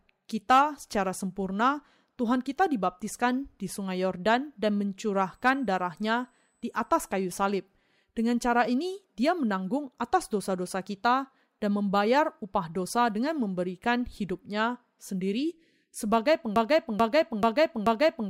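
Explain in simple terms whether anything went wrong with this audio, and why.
Two things go wrong here. From 5.15 to 7.23 s there's a USB whine: a thin, steady high whistle at 8 kHz, leaking in from the USB connection's power or ground.

Then, from 16.56 s to the end, a broken-record loop: a 0.43-second snippet repeats four times back to back, most likely because playback or streaming stalled, so the real audio there is lost.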